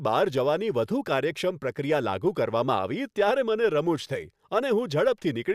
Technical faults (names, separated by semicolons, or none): crude rate conversion